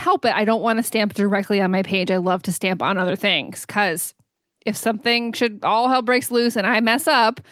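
No technical faults can be heard anywhere in this recording of speech.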